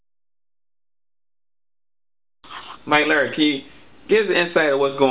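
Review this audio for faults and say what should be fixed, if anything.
Nothing stood out on listening, so there is nothing here that needs fixing.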